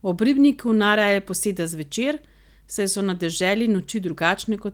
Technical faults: none

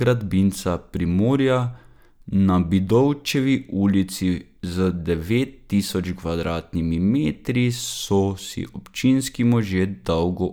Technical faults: none

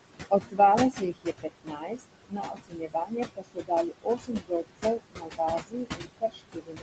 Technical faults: noise suppressor artifacts; speech cut by the noise suppressor

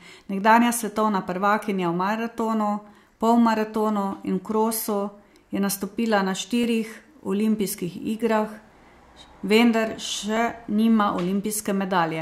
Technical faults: clock drift buffer slips

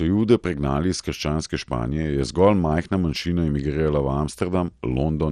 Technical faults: MP2 compression

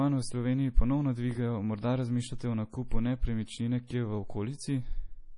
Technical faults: MP3 compression; pre-echo

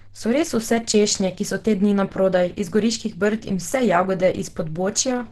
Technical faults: Opus compression

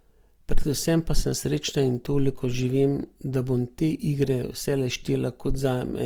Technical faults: Opus compression

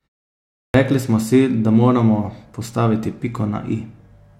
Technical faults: clipped start after a pause

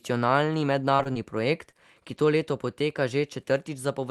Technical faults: short concealed packet loss

